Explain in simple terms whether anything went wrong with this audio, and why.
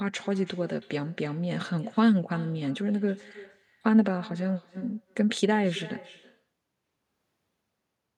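Something did go wrong here: there's echo with no canceller running through the whole recording. Every bit of speech comes back a moment later, roughly a third of a second behind, as a fainter, thinner copy. That happens when the other end plays the call through a loudspeaker, their microphone catches it, and nothing strips it out before it's sent back down the line.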